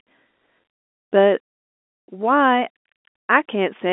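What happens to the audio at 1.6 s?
Nothing goes wrong at 1.6 s: the speech carries on intact through that moment, heard through the narrow band of the G.711 telephone coding.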